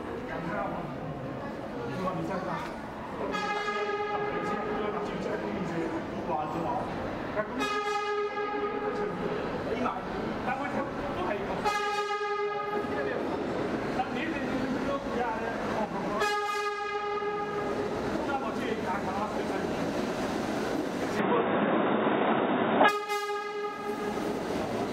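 The recording input was likely switched to a poorer device from 21.19 s to 22.89 s, as if capture briefly moved to another microphone or a headset's call profile. During that stretch the audio loses everything above 3.8 kHz, so it turns dull and boxy, shifts modestly in level, and picks up a faint background noise of its own. The change happens with no gap at the switch, and the fuller sound returns at 22.89 s.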